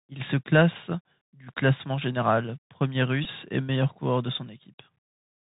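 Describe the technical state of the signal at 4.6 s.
At 4.6 s the speech is still carrying Bluetooth CVSD headset codec damage, as it does from start to end. CVSD sends one bit per sample, saying only whether the wave steps up or down, and it adapts the step size. The sound fits a 64 kbit/s stream. Nothing above 4 kHz survives. Loud high sounds outrun the step and distort. S sounds turn scratchy. A granular hiss sits under the speech, and the codec damage is plainly audible.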